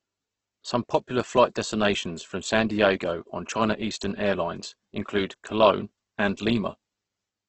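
A speech recording that is grainy and rough from start to finish, with nothing above about 8.2 kHz. This is most likely heavy Opus compression at a very low rate, near 12 kbps. The encoder keeps each band's energy but fills starved bands with folded or noise-like content, which fits its music (CELT) mode. That fill is what separates it from MP3 damage: there are few spectral holes and little swirling, just a dense, gritty texture over the sound.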